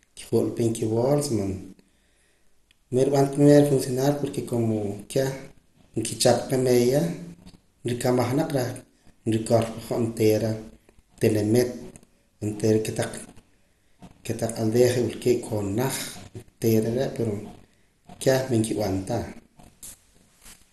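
Throughout the speech, nothing sounds above 12.2 kHz, so it is dull. A gurgling, granular roughness runs under every passage. This is likely MP2 compression at a low rate, near 64 kbps, starving the upper sub-bands of bits and quantising the rest coarsely.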